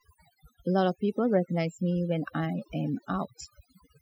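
Throughout the clip, the background sinks to near silence dotted with twinkling specks. This is overdone noise removal: a noise reducer set too hard cuts individual frequency bands whenever they approach its noise estimate, stripping quieter parts of the voice too.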